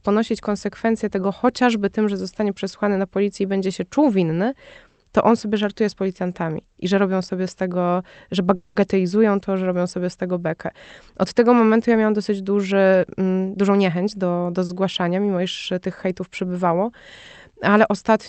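A call audio freeze runs from 8.55 to 8.77 s, right after "sobie z tego że". The last sound is drawn out as a fading buzz or hiss for about 200 ms, likely because delayed packets left the jitter buffer empty. The speech then resumes where it stopped, so nothing is lost, but the pause pushes everything after it about 200 ms later.

A jitter buffer speed-up follows from 12.72 to 14.55 s, after "momentu ja miałam dosyć". With too much audio queued, the receiver repeatedly trims pitch-period-sized slices, about a fifth of a second in total. The speech plays at 111% speed with unchanged pitch and sounds hurried.

A short stall from a late packet occurs at 14.65 to 14.71 s, just before "mimo iż tych hejtów". A packet missed its slot, so the receiver held the previous sound for 40 ms until it arrived. Nothing is missing, but a sound is briefly prolonged with a slight buzz or dip, heard through the call path's 8 kHz bandwidth.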